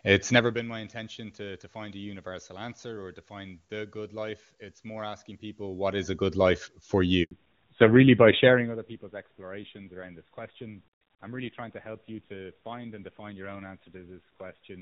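A handover gap opens at 7.23 s and lasts 80 ms, until 7.31 s. The call was being passed from one network to another, and during the switch no speech frames got through, so the voice falls away almost instantly into dead silence. Whatever was said in that short stretch is missing, and the speech returns once the new link starts carrying audio.

A fallback to narrowband follows at 7.31 s and runs to the end of the clip. Before the handover, the HD Voice path carries crisp, wideband speech with little or no audible codec damage, which fits the top wideband rate, about 23.85 kbit/s. After the switch, the call is on narrowband AMR at a rate consistent with 7.4 kbit/s. Nothing above 4 kHz remains, so the voice sounds muffled, boxier and grainier.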